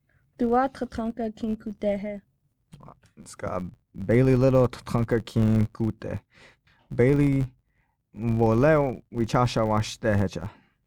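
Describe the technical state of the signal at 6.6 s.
At 6.6 s the filter is restarted on every block, as throughout the clip: each block starts from silence, giving an 86.1 Hz buzz tracking the speech level, which fits 512-sample blocks.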